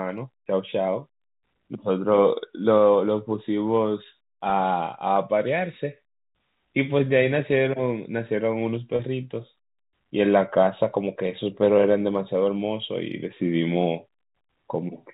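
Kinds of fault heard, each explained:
Packet loss with pitch repetition: packets went missing and the receiver bridged each gap by looping the last pitch period, so 10 ms losses at 4.5 s and 12.87 s become a brief held buzz, and a 30 ms loss at 8.96 s holds it slightly longer.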